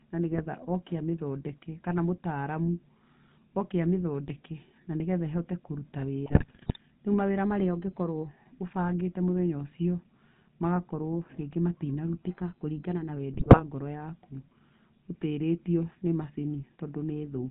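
The whole clip runs through the GSM full-rate codec, and you can plainly hear it. It has that buzzy, gravelly edge and nothing above 4 kHz, which fits the old 13 kbps full-rate scheme. It rebuilds the voice from a coarse pulse excitation pushed through a vocal-tract filter.

Right at the start, from 0.31 to 0.46 s, just before "oke amĩthondeke kana mũtaramu", there's a burst of GSM bit errors. Corrupted filter, pitch and gain values reach the decoder, and the speech briefly squawks and gargles. It comes back harder from 6.26 to 6.77 s, straight after "na nĩgetha ĩhote kũruta", a longer and rougher run of pops and garbled frames.

From 12.27 to 13.16 s the speech suddenly plays about 6% fast and a semitone sharp, roughly 104 cents. That's likely a drift correction step, where clock-matching software jumped the playback rate to rebalance its buffer. Almost immediately afterwards, from 13.33 to 13.62 s, another cluster of GSM bit errors bends the spectrum and throws out more squawks.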